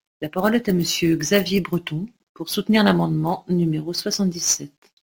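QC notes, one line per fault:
Throughout: sample clock jitter. The speech carries a fine hiss and roughness that rides on the sound itself. It grows on loud passages and on sibilants and other bright, fast-changing sounds, and it drops away in the pauses. The converter's clock wobbles by a few microseconds, so each sample lands slightly early or late. Steep parts of the waveform turn that timing error into amplitude error. The resulting noise sits only about 25 dB below the speech.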